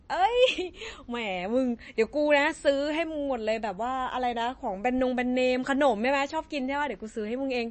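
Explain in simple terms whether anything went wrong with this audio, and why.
Something did go wrong, and it runs through the whole clip. The speech has a watery, swirly edge, and nothing is left above about 8.4 kHz, so the top end sounds dull and the s sounds go smeary and metallic. That's likely MP3 compression squeezed too hard: the encoder ran short of bits, chopped the treble off at a fixed point, and let quiet details flicker in and out from moment to moment.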